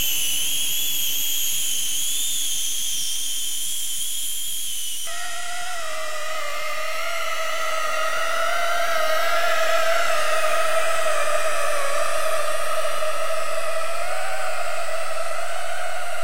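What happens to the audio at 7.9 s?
Nothing goes wrong at 7.9 s: the sound carries on intact through that moment, with no dropout, click, distortion or other fault to be heard.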